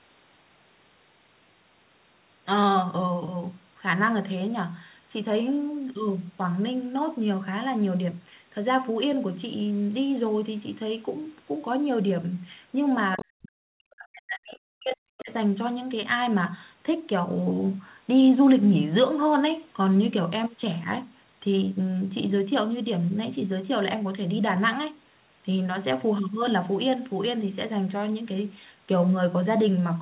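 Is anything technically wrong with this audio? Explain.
Yes, there are two problems, both bunched up around the 13-second mark. The whole clip is band-limited to 4 kHz, which fits a 64 kbps G.711 mu-law call leg, so that dullness is just the phone-line character and not a fault.

From 13.18 to 15.31 s there's speech suppressed in double talk. The voice sinks hard, at its deepest something like 40 dB down, and stays choked off for about two seconds total across that window. It's likely the echo canceller hearing both ends active at once, failing to tell its own talker from loudspeaker echo, and clamping the microphone signal down wholesale instead of just removing the echo.

Right at the start of that, from 13.19 to 13.25 s, you get the other side's voice leaking through: a brief scrap of a second voice, roughly 15 dB below the talker, lasting around 60 ms. That's likely far-end audio from the loudspeaker reaching the mic and slipping past the echo canceller.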